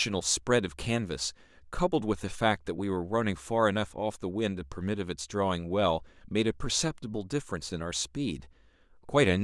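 Nothing stood out as a technical fault on listening to this speech recording.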